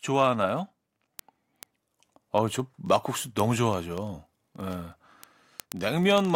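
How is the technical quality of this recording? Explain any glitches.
The recording has a clock-sync fault. Word clock ticks run from 0.10 s to 6.35 s: the receiving device isn't locked to the sender's clock, drifting by roughly 0.1 percent, so a single sample slips about every 20 ms, producing hundreds of sharp, uneven ticks at a steady rate across the speech.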